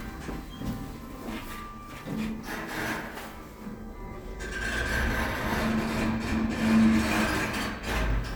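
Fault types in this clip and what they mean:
The audio shows no technical faults anywhere in the recording.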